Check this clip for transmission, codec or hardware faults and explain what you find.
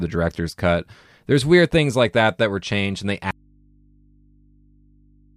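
There is one fault, an audio dropout to a faint residue, starting at 3.31 s, just after "were changed and they", and lasting to the end. The speech stops abruptly, leaving only mains hum roughly 35 dB below the speech level, most likely because the signal feed was lost while the input stayed open and live. The waveform collapses to a thin, steady band, and the spectrogram shows only narrow hum lines at the low end.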